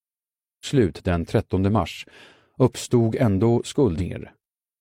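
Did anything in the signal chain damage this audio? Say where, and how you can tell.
Yes, damaged data in a compressed stream at the codec or storage stage: brief glitches at 0.61–0.66 s and 3.95–4.01 s, where the decoder misread corrupt frames. Spectrograms show short disturbances at those times.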